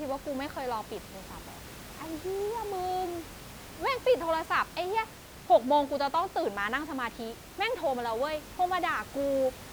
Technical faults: none

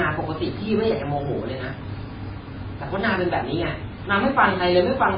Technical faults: MP3 compression

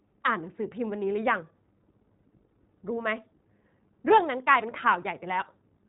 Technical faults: iLBC codec

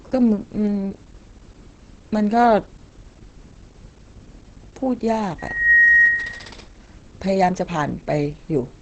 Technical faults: Opus compression; loudspeaker feedback squeal

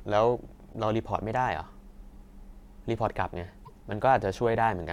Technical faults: damaged data in a compressed stream

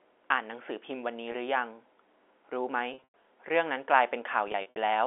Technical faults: packet loss with pitch repetition

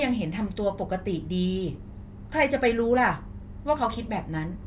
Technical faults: none

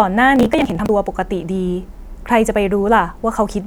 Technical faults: processor overload crackle

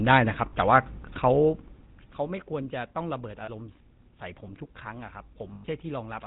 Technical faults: GSM full-rate codec; lost GSM frames

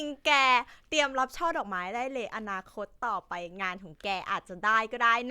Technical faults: none

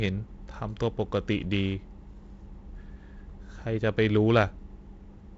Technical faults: none

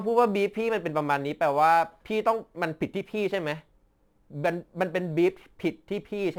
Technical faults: crude rate conversion

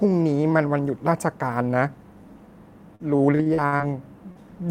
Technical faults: repeated packet loss (robotic sound); short concealed packet loss

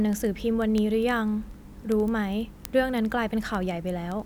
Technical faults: word clock ticks

